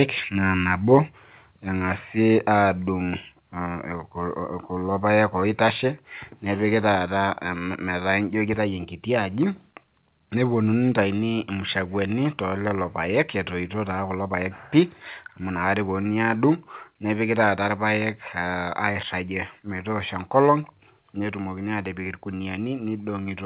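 At 0.94 to 0.96 s there is microphone overload: a peak reaches the converter's limit and its top is flattened, giving a short harsh crackle. Only a small fraction of samples is affected, and an input gain set too high is the likely cause.

Microphone volume stepped down follows at 1.02 s and 2.37 s, about 2 dB each; at 11.04 s, about 1 dB; and at 21.24 s, about 2 dB. At each point, sound and background fall abruptly together, likely from the call software cutting input gain after detecting excess level.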